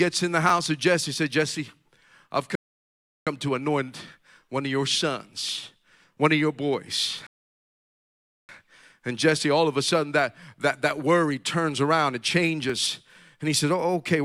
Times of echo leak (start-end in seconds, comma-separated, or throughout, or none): none